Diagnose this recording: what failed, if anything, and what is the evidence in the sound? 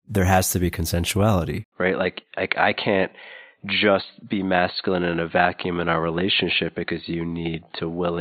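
Input switched to a poorer device at 1.64 s, right after "has to be consensuality". After an 80 ms gap, the speech loses everything above 4.4 kHz and picks up a faint new noise floor, with little level change. This likely reflects driver-level rerouting to a narrower-band microphone.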